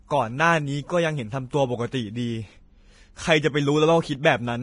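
Throughout, the treble sounds hissy and grainy with nothing above 10.6 kHz. This heavy damage fits low-bitrate Vorbis compression, likely near 29 kbps, and the hiss follows the speech rather than staying steady like background noise. At 4.23 s there is pre-echo, an 18 ms hiss just ahead of a sharp attack. The codec's noise spreads backward through its block, so the smear comes before the onset, unlike a click that sits on it.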